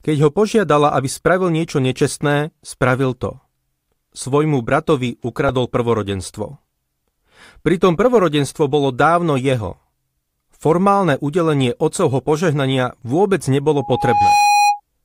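From 13.78 to 14.80 s, loudspeaker feedback squeal: the mic-speaker loop rings at 824 Hz, swelling over roughly half a second to sit a few dB above the speech, a bright horizontal spectrogram line.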